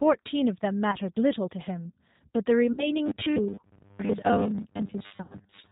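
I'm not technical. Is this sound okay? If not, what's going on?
No. The G.729 codec, a phone-call speech compressor, makes the whole speech sound slightly rough and synthetic and removes the upper treble, so it sounds muffled throughout.

VoIP packet loss concealed by the speech codec occurs at 0.91, 2.72 to 2.94 and 5.22 to 5.36 seconds. Missing pieces are guessed, leaving brief fading buzzy smears, unlike steady robotic sound.

From 3.06 seconds to the end, the voice becomes a rigid metallic 100 Hz buzz: robotic sound from repeated short buffers, likely roughly half the audio replaced by repeated 10 ms snippets.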